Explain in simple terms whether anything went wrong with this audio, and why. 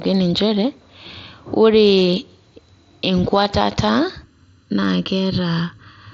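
Two separate things go wrong in this speech recording.

At 2.00 s and again at 3.44 s there is concealed Bluetooth headset packet loss: tiny pieces of sound traveling from the headset to the phone went missing, about 7.5 ms the first time and 15 ms the second. The phone patched each hole by repeating a closely matching bit of the sound just before it. That's why you hear no silence or click, only a barely noticeable blip, slightly buzzier at 3.44 s, where two pieces in a row were lost.

From 4.24 s to the end there is comb filtering caused by a channel delay: one side of the recording runs roughly 0.7 ms behind the other, and when the two are mixed together some pitches cancel out, the lowest near 700 Hz and others evenly spaced above it. The sound suddenly turns hollow and phasey, like speaking into a tube. Unlike the general dullness of a low-quality headset link, it switches on at one moment and stays fixed until the end.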